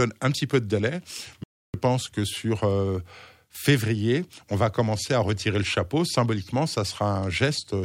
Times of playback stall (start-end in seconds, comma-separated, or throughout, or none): 1.44-1.74